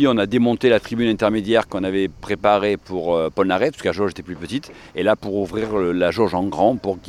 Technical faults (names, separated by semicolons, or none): none